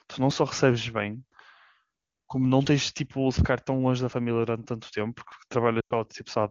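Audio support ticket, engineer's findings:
Likely capture overrun: samples not read before the hardware buffer was overwritten, so short stretches are lost and the edges are spliced together. Heard as small forward jumps in the speech at 0.31, 2.66, 4.13 and 5.32 s, skipping roughly 10 to 30 ms each, no silence.

Lost AMR speech frames, 5.80 to 5.93 s: radio-side errors failed frame checksums, so the decoder repeated the last good pitch and vocal tract parameters at falling gain. About 100 ms concealed, which fits five 20 ms frames. Speech drops to near silence within two frames, then returns briefly weak and rough. AMR-WB runs at 23.85 kbit/s with at most faint coding damage.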